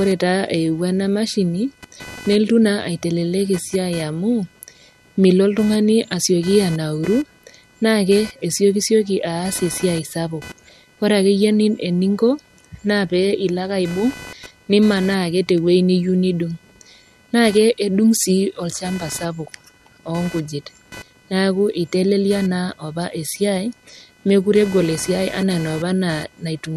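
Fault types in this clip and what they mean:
Computer activity noise: a buzzing, chirping texture with a pulse rate of roughly 500 Hz runs under the speech for the whole clip, sitting roughly 25 dB below it. Its rises and falls track what the machine is doing, not the speech. Changing load from the processor, graphics card or mouse shifts the ground shared with the audio circuit, and that shifting ground leaks into the recorded signal as this pulsing interference.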